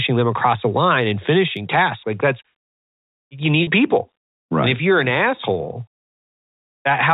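At 3.63 s, packet loss with pitch repetition drops about 40 ms of speech. The receiver repeats the last pitch period to fill the gap, so the sound briefly holds with a buzzy tone.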